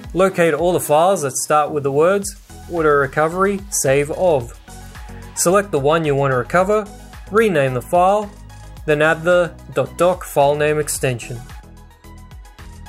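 A sudden gain jump at 11.6 s, likely a gain step applied without a ramp, drops the sound and background noise together by about 6 dB until the end.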